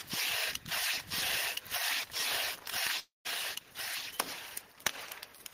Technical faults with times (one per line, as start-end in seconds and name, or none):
2.99-3.27 long network dropout